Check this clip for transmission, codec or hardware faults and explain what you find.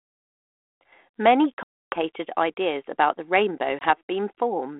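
The clip has packet loss on an ADPCM call, twice. Packet loss on an ADPCM call at 1.63 to 1.99 s (about 290 ms gone, a few dozen packets) and 3.79 to 3.85 s (20 ms, a couple of packets): missing audio became hard-edged silence. The decoder's adaptive predictor and step size then lost track of the sender's, so speech resumes slightly distorted before settling. The underlying light, band-limited coding fits 32 kbit/s G.726.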